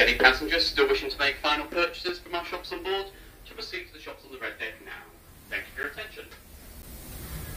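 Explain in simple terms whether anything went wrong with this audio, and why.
Three short blocks of digital silence interrupt the sound, at 2.09, 5.83 and 6.82 seconds. The audio drops to zero for about 3, 10 and 10 milliseconds. The cut is abrupt, so each one sounds like a tick. Most likely, the software didn't refill its output buffer in time.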